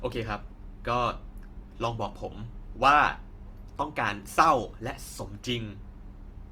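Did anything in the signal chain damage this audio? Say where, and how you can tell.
Yes, at the codec stage. The speech sounds noisy and grainy throughout, plainly so. Content still reaches about 20.2 kHz, so nothing narrowed the band. That fits Opus compression, likely in CELT mode near 24 kbps, filling starved bands with folded or noise-like energy.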